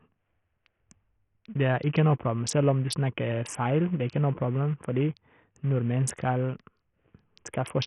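From start to finish the speech carries heavy coding damage, most likely Bluetooth SBC compression. Nothing survives above 11.8 kHz, and the upper treble that remains flickers in and out while a gritty, grainy noise and aliasing cling to the sound. The degree of damage points to a starved bit budget, around 48 kbps. On a spectrogram the top edge looks ragged and blotchy under a hard ceiling at 11.8 kHz.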